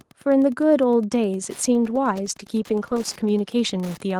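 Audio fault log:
throughout: Wi-Fi interference. A faint, steady ticking runs under the speech about ten times a second, well below it at roughly 30 dB down. A nearby Wi-Fi radio's beacon, repeating every 102.4 ms, is being rectified by the audio circuit and heard as clicks.
1.66 s to end: call bitrate drop. From 1.66 s the speech turns rough and watery, with a duller top end, and stays degraded for its lowest stretch of about 1.56 s. The call's bandwidth estimate fell, forcing the Opus encoder to code more coarsely, which fits a fall from about 32 to 15 kbps.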